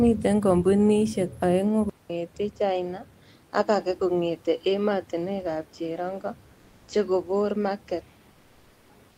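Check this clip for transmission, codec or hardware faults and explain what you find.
Two faults are audible in this speech clip.

At 1.90 s the sound drops out for 200 ms and returns duller, with nothing above 7.6 kHz, which points to the input likely switched to a poorer device. The narrower band, different tone and new noise floor, roughly 45 dB below the speech at much the same level, set it apart from a codec bandwidth change, which leaves no gap or fresh noise.

From 8.31 s to 8.87 s, for 560 ms, the room background, about 35 dB below the loud speech, gives way to comfort noise in place of the background, likely from Opus DTX. The sender stops transmitting during the pause and the receiver synthesises a steady, featureless hiss about 2 dB quieter. A noise gate would leave silence rather than substitute noise.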